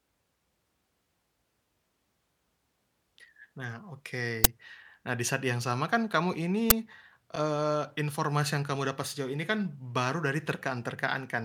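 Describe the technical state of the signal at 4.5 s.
At 4.44 s there is an uninitialised buffer fault: a single 10 ms block of the speech was played out before any audio had been written into it, so whatever stale data sat in that memory was sent to the output as if it were samples. The result is a very short, loud crack that cuts abruptly across the speech and stops just as suddenly once the next properly filled block arrives.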